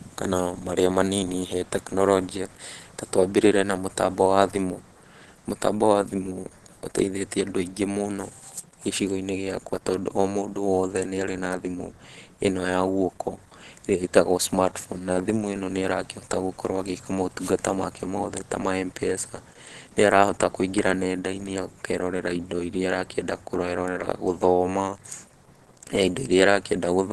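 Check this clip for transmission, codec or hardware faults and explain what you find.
One codec fault runs through the whole clip. Opus compression, present from start to finish, is the likely cause. The encoder appears to run in its hybrid speech mode, passing nothing above 12.2 kHz, which fits a low rate near 16 kbps. The speech sounds plainly muffled and hoarse, with grainy, roughened detail.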